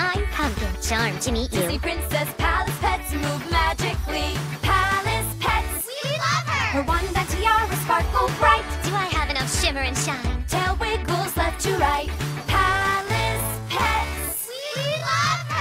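From 12.61 s to the end, the audio abruptly drags to about 0.59 speed at unchanged pitch, likely a time-stretched section from software padding it.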